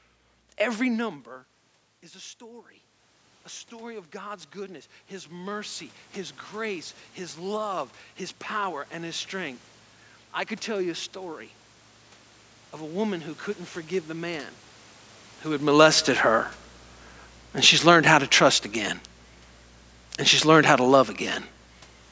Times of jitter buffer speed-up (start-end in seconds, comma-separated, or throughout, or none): none